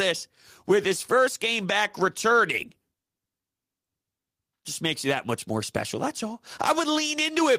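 No technical faults can be heard anywhere in the recording.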